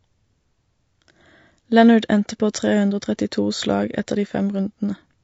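From start to finish the speech sounds rough and grainy, with a noisy fill between the pitch harmonics and a thin, artificial quality to the upper frequencies. The damage is plainly audible. This is likely low-delay AAC compression, AAC-ELD, whose very short frames cannot separate closely spaced harmonics well and spend bits less efficiently. At a rate consistent with roughly 32 kbps, too little detail survives, so noise fills the gaps and the top band loses its natural texture.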